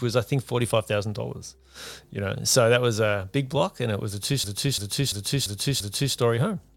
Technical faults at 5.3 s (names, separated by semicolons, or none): system hang loop